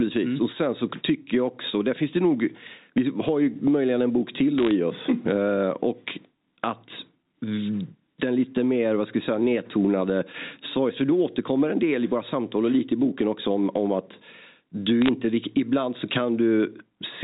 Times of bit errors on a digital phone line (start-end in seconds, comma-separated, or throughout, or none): 4.58-4.71, 15.02-15.09